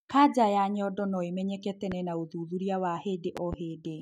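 A speech clip with two loud pops: a single one at 1.92–1.95 s, between "ya nyondo noĩmenyeke" and "na ũthuthurĩa", and a double one at 3.37–3.56 s, each peaking around 10 dB above the speech, which continues underneath. These are likely voltage transients from a plug, switch or static discharge.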